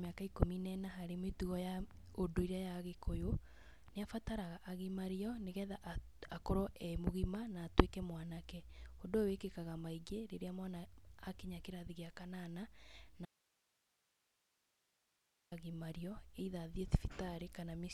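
At 13.25 s the speech cuts out abruptly, returning at 15.52 s after 2.26 s. This is an audio dropout to a faint residue: the gap holds only hiss, roughly 40 dB below the speech, likely from a signal break while the downstream path stayed live.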